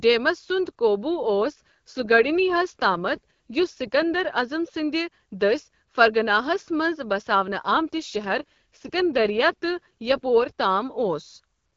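An AMR rate drop runs from 1.19 to 4.28 s, ending just before "عظم سندِ دٔسہۍ فرغانہَس", and another from 7.30 to 10.52 s. Each time the link forces the codec down from its normal HD Voice rate, which sounds like a step from 12.65 to about 8.85 kbit/s, so more bits go to error protection. The speech turns rougher and more synthetic, with no gap and no loss of bandwidth, until the rate recovers.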